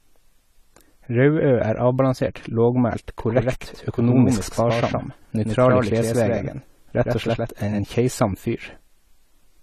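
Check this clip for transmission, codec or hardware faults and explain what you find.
Two faults are audible in this speech clip: one runs throughout and one lasts for several seconds in the middle.

Low-bitrate audio saved at a high bitrate affects the whole clip. Nothing is present above 14 kHz, and the speech carries the smeared, swirly texture of heavy compression even though the file is an MP3 at a generous rate. This likely comes from a low-bitrate source, possibly AAC, being re-encoded: the second pass could not restore what the first one discarded. It differs from a simple low-pass filter because the compression artefacts remain beneath the cut-off.

A doubled audio track runs from 3.19 s to 7.79 s, beginning just after "er avbalansert lågmælt". A second full-band copy of the speech trails the original by about a tenth of a second and is only about 5 dB quieter. The likely cause is the same signal arriving a second time through a slower path. 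It is not an echo or reverb: the copy has no decay or room colour, and it starts and stops abruptly.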